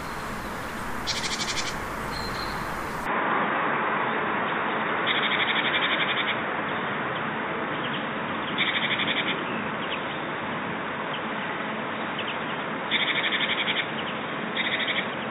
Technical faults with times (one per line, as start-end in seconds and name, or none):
3.06-15.31 input switched to a poorer device